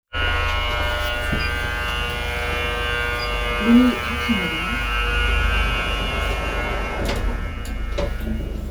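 No technical faults are audible anywhere in the recording.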